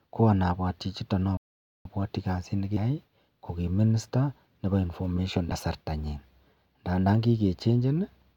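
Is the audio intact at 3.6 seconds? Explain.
Yes, at 3.6 seconds the speech runs through cleanly with no dropout, click, distortion or other break in the sound.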